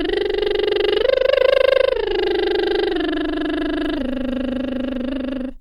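No technical faults are audible.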